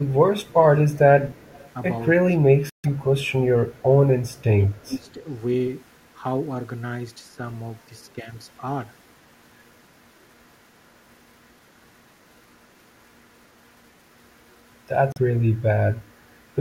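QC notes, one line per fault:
0.00–0.62, 0.93–1.39, 2.21–3.93, 4.56–5.07 and 8.14–8.29 s, speech suppressed in double talk: the speech dips in level, by as much as about 25 dB in the 2.21 and 4.56 s stretches. This is likely an echo canceller turning down near speech it could not tell apart from loudspeaker echo while both sides talked.
1.37–1.71 and 4.29–4.43 s, echo leak: a faint delayed copy of the speech trails it by 248 ms, about 30 dB and about 40 dB below the direct speech respectively. This is likely far-end loudspeaker sound that the echo canceller left partly unremoved and sent back.
2.70–2.86 and 15.12–15.18 s, Bluetooth stall: the audio drops to silence for 144 ms and then 39 ms. This likely comes from the headphone buffer running dry while interference delayed packets.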